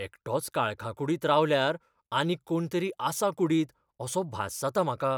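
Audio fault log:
Nothing stood out on a careful listen to the speech here.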